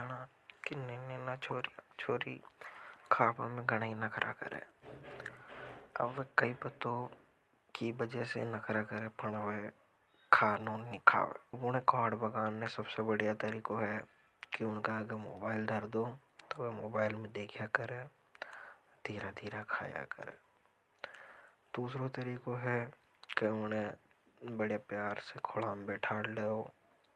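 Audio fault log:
11.53 s skip ahead: about a second of speech is dropped and both sides butt together, leaving an abrupt waveform seam with no silent gap on the spectrogram.
12.23–14.22 s jitter buffer speed-up: excess buffered audio is trimmed in pitch-period pieces, so speech runs about 7% faster at unchanged pitch, with harmonics compressed slightly in time, ending before "कि उनका अग".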